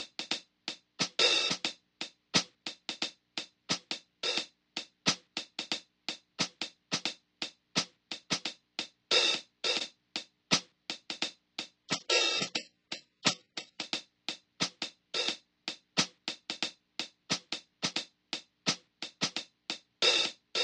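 At 11.83 s an adaptive stream at a lower bitrate takes over for 2.0 seconds: the sound abruptly loses everything above 8 kHz and turns smeared, consistent with a very low-bitrate HE-AAC rendition. Unlike a dropout, playback never pauses, and quality snaps back at 13.83 s.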